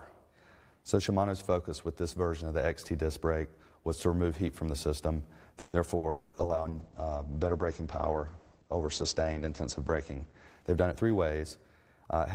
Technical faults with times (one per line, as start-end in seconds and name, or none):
5.59-5.76 call audio freeze
5.97-6.06 burst of packet loss
6.09-6.36 long network dropout
6.26-11.80 call bitrate drop
10.62-11.01 jitter buffer speed-up